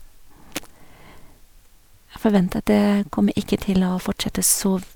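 No technical faults can be heard anywhere in the recording; the signal stays steady and intact throughout.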